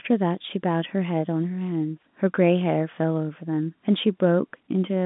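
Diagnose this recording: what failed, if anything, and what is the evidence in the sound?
Nothing failed: the speech arrives through an ordinary telephone-band path, with nothing in the sound pointing to a fault at any stage.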